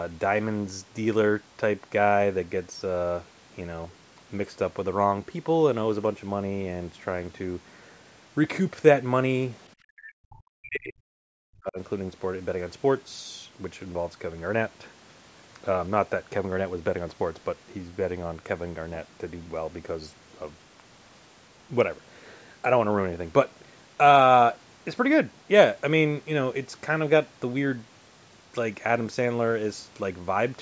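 From 9.98 to 11.78 s the speech drops by roughly 40 dB, about one and a half seconds affected, likely speech suppressed in double talk by an echo canceller. The waveform envelope sinks there, and the spectrogram shows the speech energy weakening below its 8 kHz ceiling.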